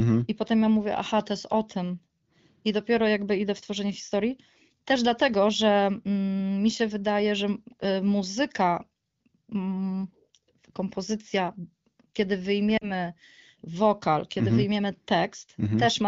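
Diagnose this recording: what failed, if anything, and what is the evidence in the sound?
Lost AMR speech frames at 12.77 to 12.90 s, a network-stage fault: radio errors corrupted about 40 ms of data, consistent with two 20 ms frames. The wideband decoder bridged the gap by repeating its last pitch and vocal tract settings at falling gain, leaving a fade toward near silence before the sound recovered.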